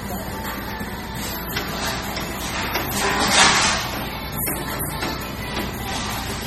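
MP3 compression runs throughout, from start to finish: the sound is cut off flatly above 16.3 kHz and carries heavy watery, swirling artefacts with smeared attacks. This is likely an encoder starved of bits, consistent with about 32 kbps, zeroing weak frequency lines frame by frame.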